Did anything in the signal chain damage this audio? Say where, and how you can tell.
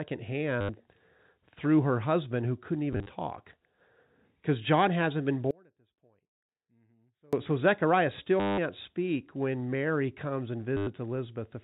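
Yes, at two stages. The first is network transport, where there is packet loss with the last packet repeated. Stutters occur at 0.61 to 0.69 s, 2.93 to 3.09 s just after "her husband who couldn't", 8.4 to 8.58 s just before "speak when", and 10.77 to 10.87 s. The receiver looped its last good packet until fresh data arrived. The repeats buzz at about 100 Hz, which fits 10 ms packets. The 2.93 s event is scattered loss, with runs no longer than 30 ms.

The second is an audio dropout to a faint residue from 5.51 to 7.33 s, right after "hasn't been". The sound cuts off abruptly rather than fading or pausing. For about 1.8 s only a faint sound remains, around 30 dB below normal level, and then the signal snaps back. The live residue in the gap shows the downstream path stayed open. The likely cause is a momentary loss of the feed upstream of it, such as a failing connection or source. The G.711 mu-law telephone band limit at 4 kHz is present, with little or no coding damage audible.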